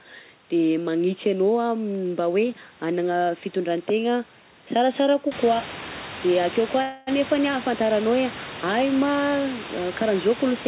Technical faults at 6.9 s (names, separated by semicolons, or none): call audio freeze